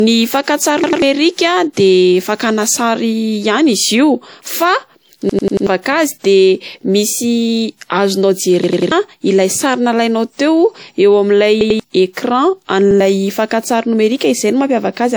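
Throughout the speech the artefacts of lossy coding remain, even though the sound still extends to about 20.1 kHz before stopping. This is low-bitrate audio saved at a high bitrate: the roughness most likely comes from an earlier encoding at around 64 kbit/s, possibly WMA, that was later stored as a 192 kbit/s MP3. The larger second file keeps the damage from the first pass and cannot restore the detail it removed.

At 0.84 to 1.02 s the speech stutters, with one short slice of about 93 ms played twice more with a hard join at each repeat. The same repeated buffer recurs at 5.29 to 5.67 s (four extra plays), 8.64 to 8.92 s (three), 11.61 to 11.80 s (two) and 12.91 to 13.00 s (one). New audio arrived late, so the device replayed its last block, which fits a 4096-sample buffer. Roughly 100 to 400 ms of speech goes missing at each stutter.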